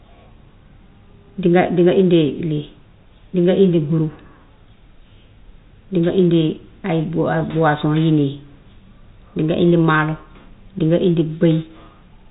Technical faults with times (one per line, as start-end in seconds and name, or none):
none